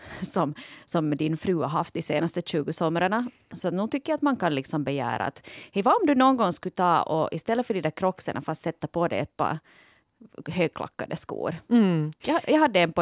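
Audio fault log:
No technical faults are audible anywhere in the speech signal.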